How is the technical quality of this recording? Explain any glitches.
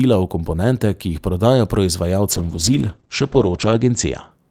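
The speech has one glitch, a call bitrate drop from 2.32 s to 4.37 s. The connection's bandwidth estimate fell and the encoder was forced to spend far fewer bits. The sound points to a fall from around 48 kbps to about 10 kbps, held at its lowest for 1.47 s. Coarser coding makes the speech rough and watery. The top end is cut from 20 kHz to 8 kHz, so it also turns muffled.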